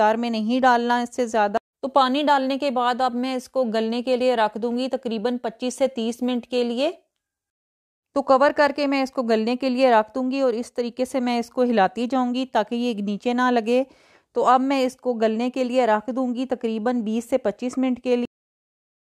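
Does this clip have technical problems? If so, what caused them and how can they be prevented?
Yes: a cut-off end at 18.25 s, where the final buffers were never written, so the sound stops mid-event into digital silence, with none of a fade-out's decay. Flush and finalise the recording buffers before closing the file.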